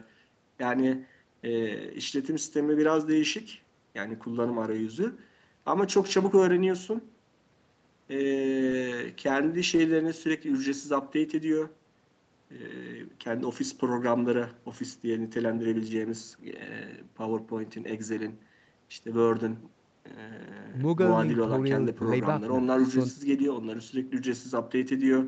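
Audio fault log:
No faults are heard in this speech clip. The call microphone processing is audible as a ceiling at 8 kHz, with nothing above it, and as a trim of the lowest bass by its high-pass filter, both normal for that path.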